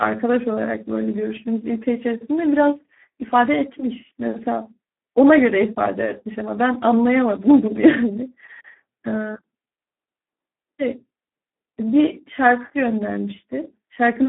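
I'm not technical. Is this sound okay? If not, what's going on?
No. From start to finish the speech has been squeezed through the Speex codec, an older voice-compression method used in internet calls and game chat. It is set very low here, so it keeps only a rough outline of each voice sound, which makes the speech hoarse, buzzy and somewhat robotic. It also passes only a narrow, telephone-like band, with nothing above about 3.8 kHz, so the sound is muffled and thin.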